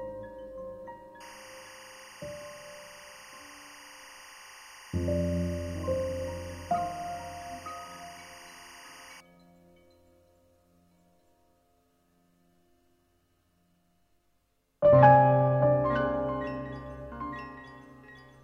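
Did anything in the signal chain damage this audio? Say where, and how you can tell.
Yes. From 1.20 s to 9.20 s a steady chirping warble sits behind the sound, roughly 20 dB below it, flipping between two pitches near 1 kHz and 2 kHz. That is timecode bleed at the analogue wiring stage. Linear timecode on a neighbouring track or cable has coupled into this path, and its square-wave bit pattern switches between those two frequencies. The rhythm of the chirping fits 23.976 fps code.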